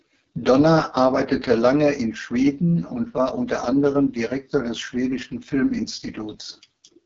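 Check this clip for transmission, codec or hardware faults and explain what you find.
The whole clip carries one codec fault: AMR wideband (HD Voice) coding. The speech comes out rough and raspy, with nothing above 7.3 kHz. The top band is filled with shaped noise rather than real detail, and that heavy roughness fits the lowest 6.6 kbit/s mode, where the vocal-tract model gets too few pulses.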